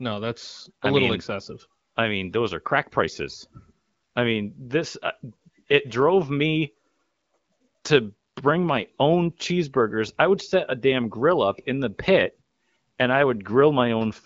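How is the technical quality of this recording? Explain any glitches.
No glitches or faults can be heard here.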